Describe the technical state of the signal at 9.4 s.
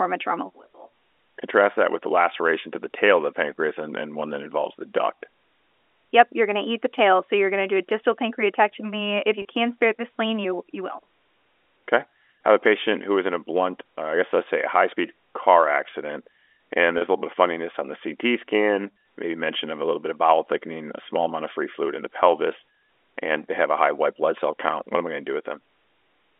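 A brief buzzy hold from 9.42 to 9.45 s, just before "can spare the spleen": packet loss with pitch repetition, a 30 ms gap bridged by repeating the last pitch cycle.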